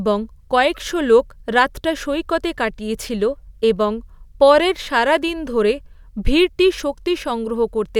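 Speech recording with no audible technical faults anywhere in the clip.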